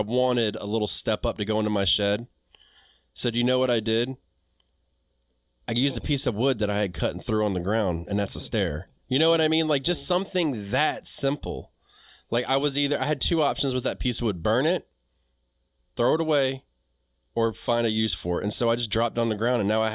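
No technical faults can be heard anywhere in this recording.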